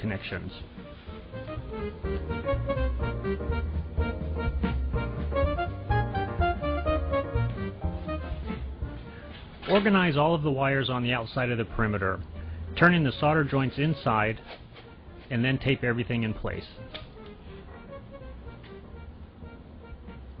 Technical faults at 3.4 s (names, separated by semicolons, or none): none